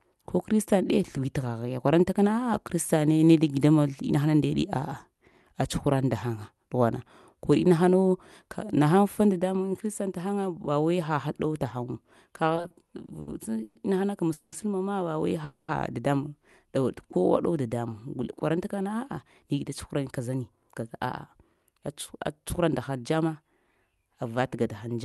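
Speech sent over a call link, with three kinds of jitter-buffer fault. From 12.55 to 13.77 s there are repeated stalls (stutter): seven short gaps filled by stretched sound, the longest 120 ms, making up about a quarter of that span. Unlike a single freeze, the speech keeps catching and dragging. Two call audio freezes follow, at 14.33 to 14.54 s (190 ms) and 15.44 to 15.70 s (240 ms). Each is one continuous fading buzz or hiss that never drops to silence before the speech resumes exactly where it stopped, likely because packets were held up. From 18.81 to 23.43 s, a jitter buffer speed-up plays the speech at about 107% by trimming roughly 0.3 s of pitch periods. The pitch stays the same, unlike a resampling error, but the delivery sounds hurried.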